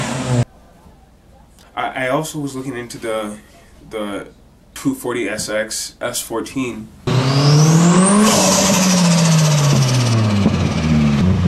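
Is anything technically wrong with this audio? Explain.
Yes. From 10.14 s to the end of the clip, wrongly applied de-emphasis is audible. A treble cut meant to reverse pre-emphasis has been applied to material that never had that boost, or has been applied a second time. The response falls smoothly toward the top, reaching about 10 dB down at 10 kHz relative to 1 kHz. The sound turns dull and muffled, losing air and crispness.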